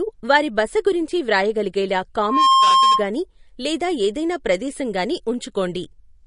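Loudspeaker feedback squeal runs from 2.17 to 3.07 s in this speech recording, starting right after "గురించి వ్రాయగలిగేలా" and dying away before "లేదా ఏదైనా ప్రదేశం గానీ". A single tone at 1.1 kHz swells over roughly a third of a second to about 10 dB above the speech. At that frequency, the microphone was picking up its own loudspeaker with a loop gain above one, so the tone fed itself and kept growing.

Throughout the clip there is plainly audible codec damage, a watery, swirling texture with smeared consonant attacks, and nothing reaches above 10.6 kHz. The likely cause is MP3 compression at a low bitrate, consistent with about 40 kbps. Starved of bits, the encoder dropped weaker frequency lines that flicker in and out between frames, and it cut the treble at a fixed point.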